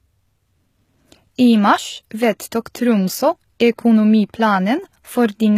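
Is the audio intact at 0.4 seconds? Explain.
No. At 0.4 seconds, as throughout, the speech has a gritty, metallic treble and lispy sibilance, with nothing above about 14.9 kHz. This is likely HE-AAC compression at a low bitrate, which fits around 20 kbps: the upper band is rebuilt from copied lower bands, so its harmonics don't align.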